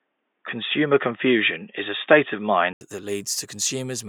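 From the start to 2.81 s the speech is dull and boxy, with nothing above 3.6 kHz, likely an input switched to a poorer device. Unlike a plain low-pass filter, it ends with an 80 ms silence, a level jump of a few decibels and a different faint noise floor.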